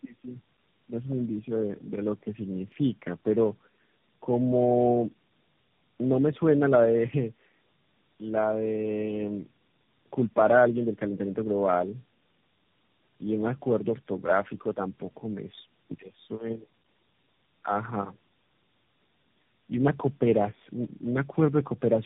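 From start to finish the speech carries tandem speech coding. The sound fits a chain of four separate speech codecs, likely G.729A, AMR-NB twice and CVSD, joined by G.711 links, each re-encoding the previous coder's already degraded output. Nothing survives above 3.8 kHz, so the speech is muffled, and it is rough and warbly throughout. Unlike a single low-bitrate codec, whose artefacts stay consistent, here different distortions pile on top of one another.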